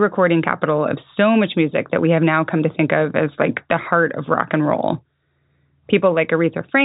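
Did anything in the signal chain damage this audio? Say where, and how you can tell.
No, nothing in the chain has damaged this speech; the top end stops at around 3.8 kHz, which is simply the ordinary bandwidth of G.711 telephone coding doing its normal job.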